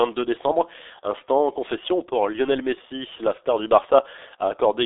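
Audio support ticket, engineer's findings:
G.723.1 codec damage, whole clip. Speech muffled and hoarse, nothing above 3.8 kHz, line band roughly 300 Hz to 3.6 kHz. Heavy damage; the coarseness fits the 6.3 kbit/s mode. Slow voice-model updates over 30 ms frames smear consonants. Unlike plain telephone band-limiting, which stays clean inside the band, this adds rasp and blurred onsets within it.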